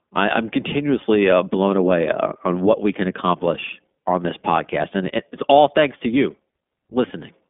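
Speech that has run through the iLBC codec from start to finish: nothing above about 3.7 kHz survives, and the clearly audible rough, slightly synthetic grain fits the 15.2 kbps mode's independent 20 ms frames, which sets it apart from clean telephone band-limiting.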